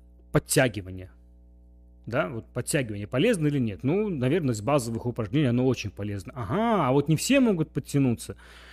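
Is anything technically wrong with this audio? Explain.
Yes. Mains hum runs through the whole speech clip: a steady 60 Hz tone with some low harmonics, sitting roughly 25 dB below the speech. A ground loop or nearby transformer is coupling the power line into the signal chain, leaving a constant low drone.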